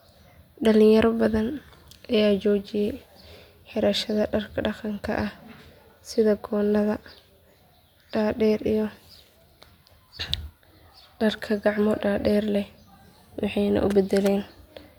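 No technical faults can be heard anywhere in the speech. There is nothing in the recording that needs a time or a comment.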